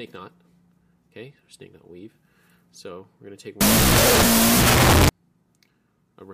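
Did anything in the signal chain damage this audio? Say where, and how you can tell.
Yes. From 3.61 to 5.09 s there is a wrong sample width at the sample-format conversion stage: 16-bit integer data read as unsigned 8-bit. Loud noise buries the sound, which plays at half speed, an octave low, because each byte is treated as a separate sample.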